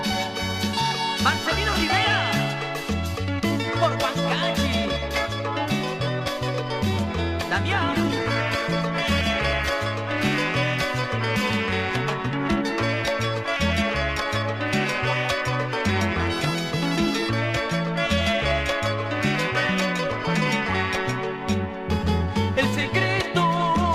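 At 7.74 s the quality drops suddenly, with no gap. It's an adaptive stream at a lower bitrate: the connection slowed, and the player switched to a thinner version. Codec artefacts rise, a shift that points to roughly 64 down to 16 kbit/s. Full quality returns at 9.74 s.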